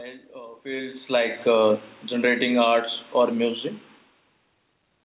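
Speech, in which the automatic gain control misjudges the level twice in quick succession. From 2.11 s to 3.64 s, automatic gain falling: the control treats the input as too loud and eases its gain down by about 3 dB, so the speech and the room noise behind it sink together over roughly a second and a half rather than at any change in how the talker speaks. Inside that stretch, from 2.69 s to 3.09 s, automatic gain rising cuts across it. The control swings the other way, judges the input too quiet and lifts gain by about 4 dB in under half a second. Voice and background swell together briefly before the downward drift resumes, giving an uneven pumping of level in the middle of the clip. The level shifts near 0.5 s and 4.0 s sound like the talker moving relative to the microphone rather than gain action, and the narrowband call path, which fits G.711 at 64 kbps, leaves nothing above 4 kHz.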